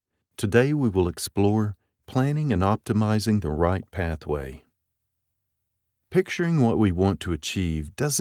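A short recording of speech, with no technical fault to be heard anywhere in it. Nothing in the signal calls for a time or a cause to be noted.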